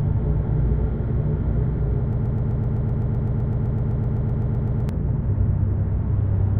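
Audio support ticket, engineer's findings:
Broken-record loop, 2.13–4.89 s: a 127 ms fragment repeats 22 times back to back, likely a stalled player buffer. Spectrogram shows identical blocks every 0.13 s; the original audio there is lost.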